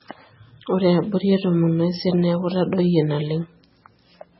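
The speech runs throughout through what is likely MP3 compression at a very low rate, with the heavy damage pointing to something around 16 kbps. Starved of bits, the encoder has removed everything above 5.6 kHz, so the audio sounds dull and closed-in. Weak frequency components that it drops in some frames and keeps in others flicker on and off, giving the speech a watery, swirling texture with metallic chirps on s sounds and smeared onsets.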